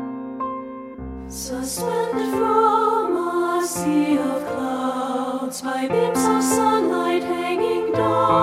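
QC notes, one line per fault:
0.93 s, compressed frames skipped: about 200 ms of audio jumps out, likely several whole frames of roughly 26 ms each. Overlapping frames smear the join into a soft blip.
2.18 s, compressed frames skipped: about 150 ms goes missing, again a whole-frame jump. The join is a brief smeared blip, not a click.
5.92 s, compressed frames skipped: a shorter gap of about 100 ms, roughly four frames, drops out. It is heard as a quick smudged jump forward.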